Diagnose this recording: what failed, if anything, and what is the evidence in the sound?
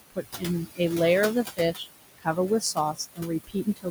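Room noise, about 11 dB under the speech, sinks between phrases and rises beneath them. These are noise suppressor artifacts from call processing, cutting the noise about 18 dB frame by frame.

Speech cut by the noise suppressor: brief stretches go faint at 0.1–0.42, 1.57–1.87, 2.18–2.37, 2.94–3.2 and 3.47–3.9 s, dropping about 12 to 20 dB as the suppressor mistakes them for noise.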